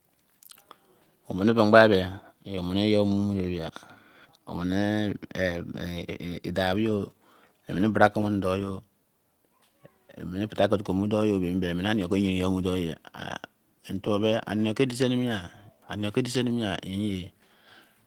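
From the start, the speech shows clock drift between sender and receiver: the sender's clock runs about 3% slow, so the receiver's jitter buffer keeps draining. Small timing hiccups recur at uneven intervals, and on a waveform the syllable spacing stretches irregularly rather than uniformly.

Between 0.15 s and 17.89 s come repeated timing corrections. The receiver repeats short pieces to stay fed, slowing the stream to 97% speed and adding roughly half a second overall. Each repeat is small, visible on a spectrogram as a duplicated sliver at uneven intervals.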